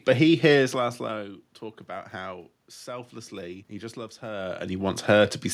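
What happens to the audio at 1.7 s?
At 1.7 s the speech carries on intact, with no dropout, glitch or other fault, only the room noise that sits under the whole recording.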